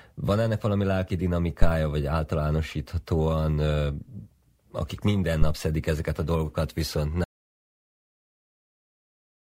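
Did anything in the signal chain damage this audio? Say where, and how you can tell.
Yes. In the analogue wiring, a phantom power thump at 5.42–5.57 s, after "akik minden", drops a deep thump that dies away in about 33 ms. That is a supply step through coupling capacitors, not a handling bump, which would have no electrical edge.

An audio dropout to silence follows "ezeket a dolgokat viszont" at 7.24 s and runs to the end. It is dead silence with no room tone, unlike a gate, and most likely comes from the input device losing its connection.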